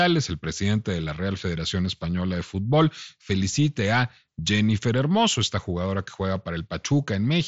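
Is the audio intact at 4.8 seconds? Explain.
Yes, the speech at 4.8 seconds is intact, carried through the Bluetooth mSBC headset codec with its usual band limit, nothing above about 7.7 kHz.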